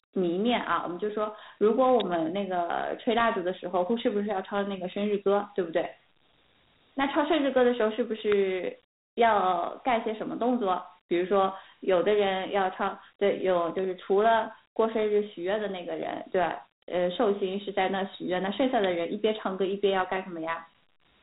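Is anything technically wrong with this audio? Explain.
Yes. Throughout, the speech carries Dialogic VOX ADPCM coding. Each sample is stored as a 4-bit step change rather than a full value, which suits a 32 kbps stream at 8,000 samples a second. The coder lags behind fast changes and overshoots on quiet passages, leaving a plainly audible gritty hiss that rides along with the speech. Nothing survives above about 3.8 kHz, so sibilants sound dull and the whole clip has a telephone-narrow band.

At 2.0, 8.32 and 13.79 s there are electrical switching spikes. Each one is a sharp snap laid on top of the speech, no more than about 12 milliseconds long, and it does not disturb the sound around it. The likely cause is a nearby switch, relay or static discharge arcing briefly, with the audio line picking up that burst as a click.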